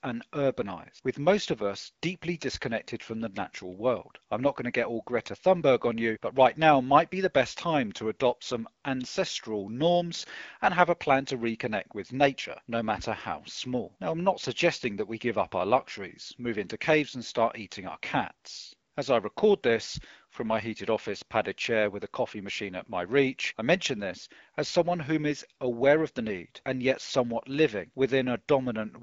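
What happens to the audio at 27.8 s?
Nothing goes wrong at 27.8 s; the speech is intact there, carried by the AMR wideband (HD Voice) codec at 12.65 kbit/s, where the coding leaves it clear.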